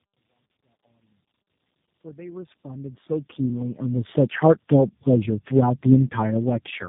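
Tandem speech coding runs through the whole clip. The audio passed through three low-rate speech codecs in a row, each one decoding and re-encoding what the last had already damaged. The character points to a chain ending in G.729A at 8 kbit/s. Errors stack up at each stage. The sound is rough, muffled and warbly, with nothing above 3.8 kHz. The gradual fade-in from the start to 4.13 s carries this same roughness.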